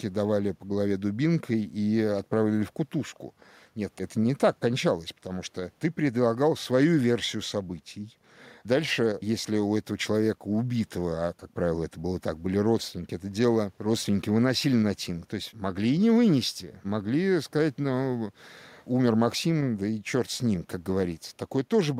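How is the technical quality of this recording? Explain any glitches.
The recording's technical quality is sound, with no glitches anywhere in the signal.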